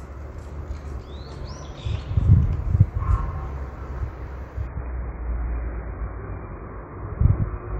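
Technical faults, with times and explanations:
4.67 s to the end, adaptive stream at a lower bitrate: the sound abruptly turns dull and smeared, with nothing above about 2.5 kHz and codec artefacts rising, but no gap. The player switched to a far lower-bitrate version, which fits a drop to around 12 kbit/s AAC.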